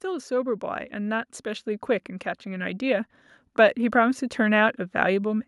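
Automatic gain rising: the gain control judged the input too quiet and ramped up, by about 6 dB from 0.05 to 1.74 s and about 5 dB from 2.44 to 4.25 s, swelling voice and background together.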